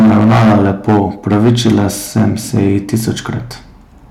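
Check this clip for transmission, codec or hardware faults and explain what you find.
One fault recurs: microphone overload. From 0.0 to 1.0 s, 1.27 to 1.87 s, 2.17 to 2.28 s and 2.54 to 3.1 s the loudest syllables turn harsh and crackly, worst at the start. Peaks running about 12, 8, 6 and 6 dB over full scale likely hit the converter's ceiling, flattening their tops: roughly a third of samples early on, later only a small share.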